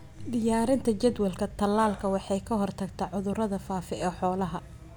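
No technical faults are audible.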